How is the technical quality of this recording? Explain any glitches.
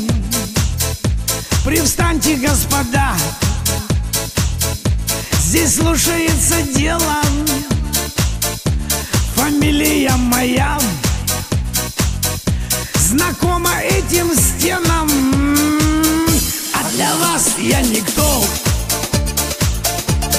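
No glitches or technical faults can be heard here.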